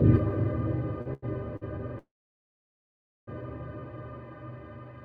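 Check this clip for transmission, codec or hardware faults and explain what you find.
Two transmission faults appear: three short stalls from late packets and one longer call audio freeze.

Short stalls from a late packet occur at 1.01 to 1.08 s, 1.14 to 1.24 s and 1.56 to 1.63 s. The jitter buffer ran empty, so the last sound was held for 41, 89 and 50 ms. It has a buzz or dip, and then playback resumes with nothing lost.

A call audio freeze runs from 1.98 to 3.29 s. The sound is stretched and then goes silent for about 1.2 s before resuming where it stopped. Packets held up in transit are the likely cause, which adds a gap but removes nothing.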